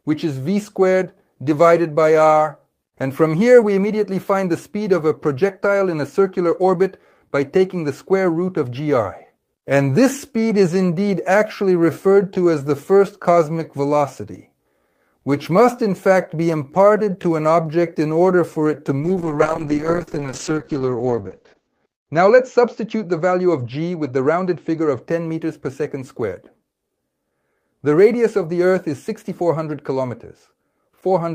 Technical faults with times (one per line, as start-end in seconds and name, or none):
19.00-25.07 call bitrate drop